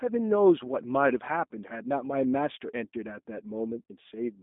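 Throughout, the speech sounds narrow, slightly rough and synthetic, with nothing above 3.8 kHz. This is G.729 codec damage: at a rate fitting 8 kbit/s, each 10 ms frame is rebuilt from a vocal tract filter, a pitch predictor and a few pulses.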